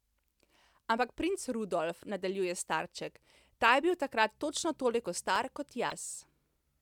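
At 5.87 s, running to 5.92 s, the speech is interrupted by damaged data in the compressed stream, lasting roughly 56 ms. Part of the encoded data at this point is corrupt, so the decoder misreads or rejects those frames, loses frame sync, and scans forward for the next valid frame header before normal decoding resumes. The result is a short, harsh chirp or blip that has no relation to the surrounding speech.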